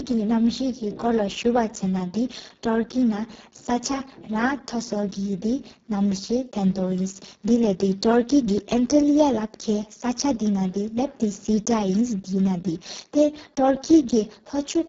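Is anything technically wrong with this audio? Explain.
Yes. Throughout the speech, the Speex codec is running at a very low quality setting, with damage that sounds consistent with a bitrate near 5.8 kbps. At that rate the CELP coder has too few bits to describe the excitation, so its model of the voice source breaks down. The result is heavily hoarse and noisy speech. Above 4 kHz there is only a shaped, hiss-like fill, and nothing at all above 7.7 kHz.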